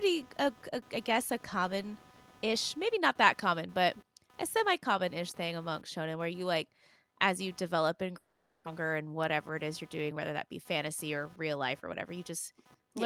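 A faint buzzing with a pulse rate of roughly 300 Hz, about 30 dB below the speech, runs throughout: computer activity noise, processor or peripheral load disturbing the audio ground. At 8.17 s, after "as you develop and", the speech gives way to a fading buzz until 8.68 s, and about 400 ms never returns, likely a long network dropout bridged by concealment. From 8.80 to 10.18 s, before "that be fantasy or", the speech runs about 5% fast at unchanged pitch, a jitter buffer speed-up trimming around 70 ms of built-up delay.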